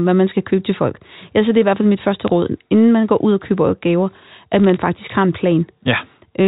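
At 2.28 s, between "hvert fald mit første" and "råd inden man går", bit errors on a digital phone line produce an isolated tick. From 4.64 to 4.82 s, after "og køber gaver at", a denser run of ticks forms crackle, at roughly twice the error rate. Each flipped bit in the G.711 stream corrupts a single sample, so the speech continues intact around every tick. Packet loss would instead leave gaps or smeared sound.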